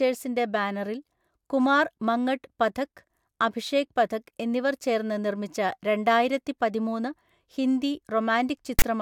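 A harsh, loud rasp with hard edges bursts out from 8.79 to 8.82 s near the end of the speech. The fault is file tags played as audio: a block of text metadata was read as samples, producing this lopsided, offset static.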